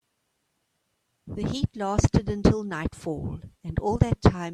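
No technical faults can be heard anywhere in the speech recording; the signal stays continuous and stable throughout.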